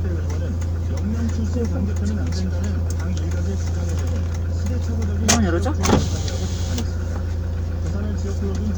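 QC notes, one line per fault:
Nothing to flag here, the audio holds up fine all the way through with no faults to log.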